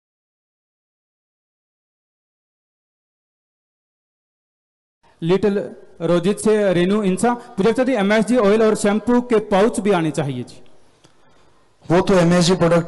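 No technical faults are audible.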